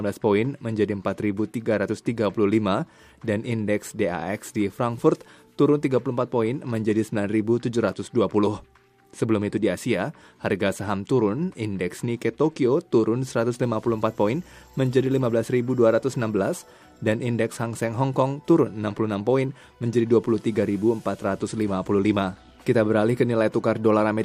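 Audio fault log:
No faults are heard anywhere in this audio. There is nothing to log against any time in the sound.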